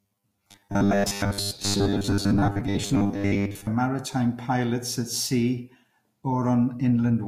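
From 0.01 to 3.67 s the speech turns robotic, a rigid 100 Hz buzz likely from repeated 10 ms buffers, fixed regardless of intonation.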